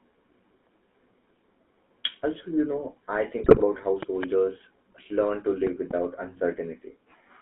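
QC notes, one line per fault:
Throughout: GSM full-rate codec. The speech passes through a vocal-tract model driven by sparse regular pulses, which fits 13 kbps full-rate coding. The band runs only from 200 Hz to 3.6 kHz, and the excitation gives plainly audible buzzy, gravelly roughness.
3.39–3.65 s: GSM bit errors. Corrupted bits reach the decoder across roughly a dozen frames, which suggests an error rate of about 3 percent. Damaged filter, pitch and gain values warp the spectrum and level, so the speech breaks into squawks and gargling.
4.03–4.26 s and 5.67–5.93 s: loud pop. Each span holds two sharp pops about 15 dB above the speech, and the speech carries on underneath. The likely cause is a voltage step or pulse from a switch, plug, static or driver glitch.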